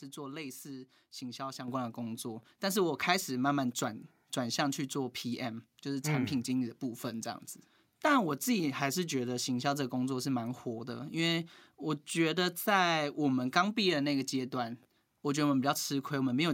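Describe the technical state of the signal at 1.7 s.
At 1.68 s the microphone volume steps up: the call software judged the input too quiet and raised the device's capture gain in a single jump of about 7 dB. Voice and background noise rise together at that instant and stay at the higher level afterwards.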